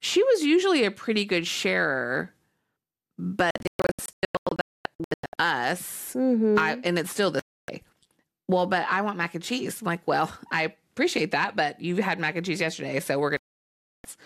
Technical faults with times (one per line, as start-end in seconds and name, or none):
3.51-5.38 digital broadcast dropout
7.39-7.69 digital broadcast dropout
13.37-14.05 digital broadcast dropout